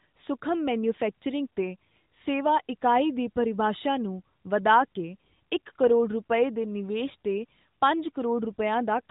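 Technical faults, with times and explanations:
No technical faults are present in this clip.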